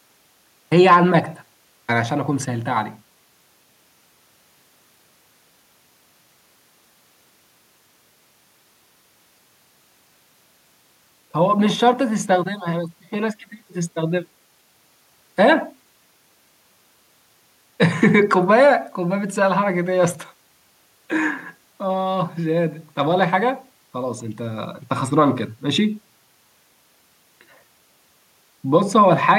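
No technical faults can be heard anywhere in the recording.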